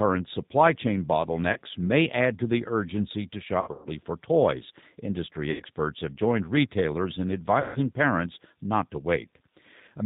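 Right through the speech you can hear G.729 coding. The voice is rebuilt at a rate that fits an 8 kbit/s stream from a vocal tract filter, a pitch predictor and a few pulses per frame, so it sounds rough and slightly synthetic, with nothing above 4 kHz.

Then there's VoIP packet loss concealed by the speech codec. At 1.53 s, after "supply chain" and before "may add to the", a gap of about 30 ms gets filled by the decoder extrapolating from its last pitch and filter. From 3.61 to 3.89 s about 180 ms goes missing in scattered bursts, the longest about 120 ms, and the sound smears and fades. From 5.51 to 5.63 s, before "have joined retailers in", about 90 ms drops out. From 7.60 to 7.79 s, between "have joined retailers in" and "parents not to", about 150 ms is lost. Each gap is stretched into a buzzy tone or coloured noise that fades, and the speech stays weak for a moment after.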